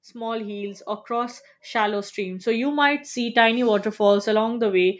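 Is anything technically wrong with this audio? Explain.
Yes. From 0.13 s to 3.51 s there is automatic gain rising. The level climbs steadily by about 12 dB over those 3.4 seconds. The gain control judged the input too quiet and kept turning itself up. It does not separate the talker from the room, so both swell together. The speech and the background grow louder at the same slow rate. The call microphone processing caps everything at 8 kHz, as a call path normally does.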